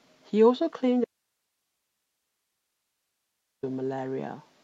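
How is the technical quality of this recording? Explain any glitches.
The recording has one clear glitch. From 1.04 to 3.63 s the speech cuts out abruptly, leaving only faint hiss about 55 dB below it for 2.58 s. This audio dropout to a faint residue likely comes from the source feed breaking while the later path stayed live.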